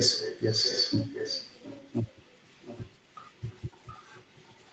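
An echo canceller on a loudspeaker end likely failed to remove what its microphone picked up, so an echo leak runs from 0.14 s to the end. A delayed copy of the speech trails about 0.72 s behind, roughly 10 dB quieter.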